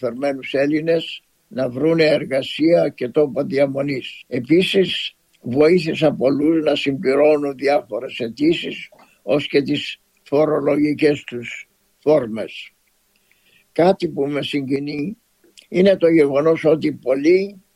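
From 14.76 to 14.99 s the sound falls by about 6 dB, a rectangular waveform dip that dims all frequencies evenly; one channel likely drops out.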